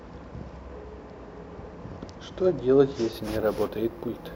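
From 3.13 s, imaging from sample-and-hold upsampling: 16 kHz speech held to 48 kHz shows stair-stepped waveforms and mirrored 8–16 kHz spectrogram bands, a metallic fizz about 24 dB down.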